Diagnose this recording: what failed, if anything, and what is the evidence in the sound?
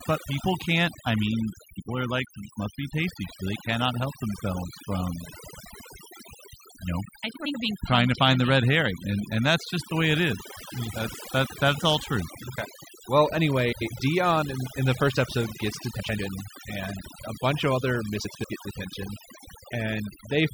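Overdone noise removal at the call-processing or post-production stage runs through the whole clip. The background sits at near silence with twinkling specks. A noise reducer set too aggressively is pulling individual frequency bands down whenever they approach its noise estimate, and the quieter parts of the voice go with them. Low-bitrate codec smearing would instead leave a steady noise floor rather than this gated, glittering emptiness.

Frames out of order, a codec or network reordering fault, appears four times: 7.35 to 7.55 s (after "you know I", before "being trying to find"), 13.72 to 13.92 s, 15.99 to 16.19 s (after "the first episode gets", before "and a bunch of") and 18.24 to 18.45 s (after "a bunch of other", before "get detention"). Each stretch lasts about 0.2 s, with two 92.9 ms halves exchanged. That fits runs of about four frames decoded in swapped order, giving a garbled flutter. 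Unlike a dropout, no time is lost.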